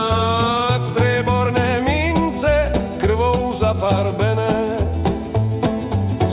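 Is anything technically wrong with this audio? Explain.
No, nothing is technically wrong with this audio; it has the narrow call-path sound of G.711 A-law, with nothing above 4 kHz.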